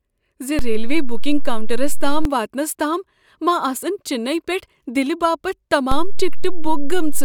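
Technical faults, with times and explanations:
0.59–2.25 s and 5.92–7.24 s, DC step: low thumps at 0.59 s just before "واتنس تام ما آسن", at 2.25 s, and at 5.92 s, while the speech continues unchanged. The waveform's zero line jumps by about −9 dBFS, as when an offset input is switched in. The first offset steps back; the second holds to the end.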